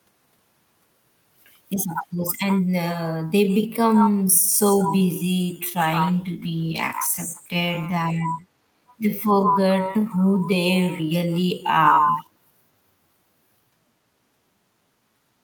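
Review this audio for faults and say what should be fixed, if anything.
From 3.24 s to the end, the time-stretched section runs at 0.58x speed with unchanged pitch, so it drags. It's likely software padding by repeating short pieces. Fix the length at the source instead of stretching.

Between 5.78 and 8.27 s there's a call bitrate drop. The sound goes rough and muffled for about 2.4 s, which fits a fall from 40 to 18 kbps. Give the call more bandwidth headroom so the encoder isn't starved.

At 8.88–8.94 s and 12.15–12.25 s, faint echo leak scraps arrive about 470–480 ms late, likely a loudspeaker on the far end getting past its echo canceller. Have that side use a headset or better echo cancellation.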